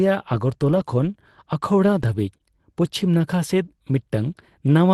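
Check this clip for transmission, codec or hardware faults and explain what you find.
Two kinds of transmission fault are audible, both from packet loss on a call link.

Brief rough, noisier patches of about 20 ms each occur ten times: eight bunched between 0.33 and 1.09 s, then two more at 2.01 and 2.13 s. This is a lost packet rebuilt from error correction. Each missing packet was replaced by a low-bitrate copy carried in the next packet, so nothing drops out, but those frames sound coarser.

From 2.37 to 2.42 s there is a short smear where the sound seems to be stretched across a hole. This is short concealed packet loss. About 20 ms never arrived in time, so the receiver extended the preceding sound for about 24 ms and then blended back into the real signal.

Both sit on an Opus call path whose audio extends to 12 kHz, with coding noise consistent with a bitrate around 24 kbps.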